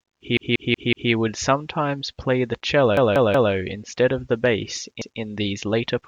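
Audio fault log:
0.37–1.12 s (before "would sometimes play the"), 2.97–3.53 s (after it) and 5.02–5.20 s (before "these later"), repeated buffer: fresh audio arrived late, so the same 186 ms chunk, which fits an 8192-sample buffer, replays four, three and then one extra time, giving a hard-jointed stutter.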